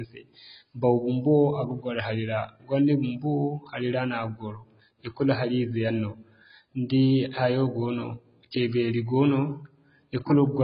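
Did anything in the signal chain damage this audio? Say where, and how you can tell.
Yes, the codec stage is the culprit. The speech is dull from start to finish, with nothing above about 5.2 kHz, and the sibilants have a fizzy, warbly smear. That's heavy damage from what's likely AAC compression, with such a low cut-off and band starvation pointing to roughly 16 kbps AAC-LC.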